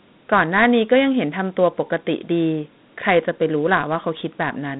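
From start to finish the speech carries a gritty, granular hiss that rides along with it and rises and falls as the talking does. The sound is boxed into a narrow telephone band of roughly 150 Hz to 3.7 kHz, with nothing at all above 3.9 kHz. This is Dialogic VOX ADPCM damage. Each sample is squeezed into a 4-bit step from the previous one, which fits 8,000 samples a second at 32 kbps. The coarse steps leave the plainly audible grain.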